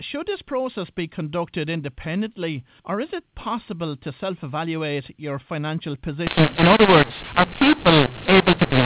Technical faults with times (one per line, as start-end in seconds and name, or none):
6.27-8.86 mu-law and A-law mixed up